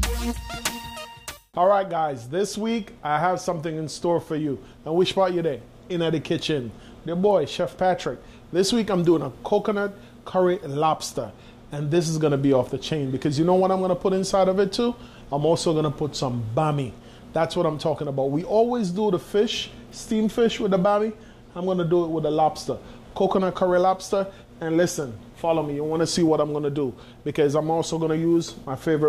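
Nothing goes wrong anywhere in this audio, so there's no fault to point to.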